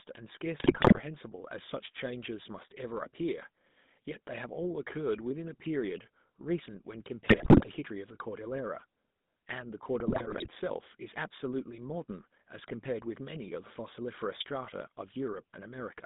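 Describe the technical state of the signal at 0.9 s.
At 0.9 s the speech sits inside a burst of GSM bit errors running from 0.6 to 1.0 s. Corrupted filter, pitch and gain values produce squawks, pops and gargling, seen as frame-sized level spikes and smeared, jumping bands. The density points to a heavy error rate across roughly twenty frames. Beneath this, the GSM full-rate codec's pulse-driven vocal-tract model adds buzzy, gravelly roughness, consistent with 13 kbps full rate. The spectrogram shows a band confined to about 150 Hz to 3.7 kHz.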